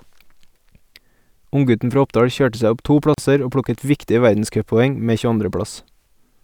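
Right after "kjørte seg opp to", at 3.14 s, there's a gap at a join of encoded pieces: about 38 ms of silence where untrimmed encoder delay and end padding meet, then "og plukket" carries on from where it stopped.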